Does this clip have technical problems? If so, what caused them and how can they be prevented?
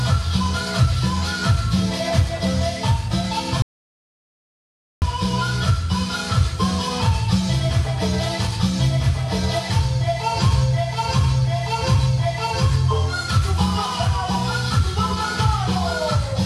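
Yes. An audio dropout to silence runs from 3.62 s to 5.02 s, cutting the sound off mid-flow and bringing it back just as abruptly after about 1.4 seconds. The gap is silent with no room tone, so whatever happened in that stretch is simply missing. The likely cause is the input signal being lost, through a disconnected device, a failed link or an accidental mute, while recording carried on writing silence. Secure cables and connections, check mute states, and monitor input levels during recording.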